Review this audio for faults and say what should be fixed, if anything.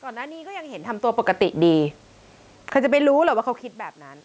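From 2.6 to 3.07 s there is automatic gain falling. The gain control judged the input too loud and pulled its gain down by about 8 dB over roughly half a second, so the speech and the room noise behind it sink together.

From 3.01 to 4.2 s there is automatic gain rising. Around 3 s the talker moves off the microphone and the input drops by about 24 dB, so the control raises its gain by about 7 dB over more than a second. Voice and background swell up together.

To prevent both, slow the gain control's attack and release and cap how far it may move, or fix the input level so that a talker moving doesn't make it pump.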